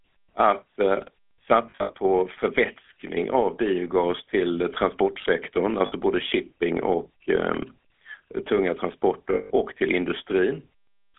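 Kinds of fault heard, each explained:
GSM full-rate codec: the speech has been through the original GSM vocal-tract coder, which points to about 13 kbps and rebuilds the excitation from sparse regular pulses. The result is a plainly audible buzzy, gravelly roughness over the whole clip, heard through a narrow telephone band of roughly 250 Hz to 3.4 kHz.
lost GSM frames: missing frames were filled by repeating the last good frame's settings, giving a rough metallic ring instead of a gap. This happens over 1.7–1.92 s before "förvätskning av biogas till", briefly at 5.86 s after "av biogas till transportsektorn", and over 9.34–9.51 s before "och till".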